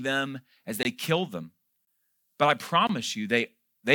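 Speech, broken by a gap between chunks at 0.83, 1.85 and 2.87 s. Each hole lasts 21 ms and recurs once a second, as silence is inserted at each join.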